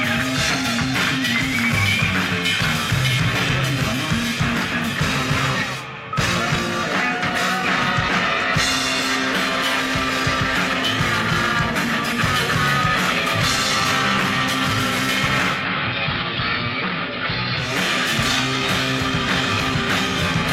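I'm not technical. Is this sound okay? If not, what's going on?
No. From 15.48 to 17.75 seconds there is a digital radio blending to analogue: the radio lost its digital signal and switched over to the station's ordinary AM broadcast, then back again. Each switch fades across in about a fifth of a second. On the AM version the sound turns dull and muffled because the top end is cut away, drops a little in loudness, and carries a faint background hiss.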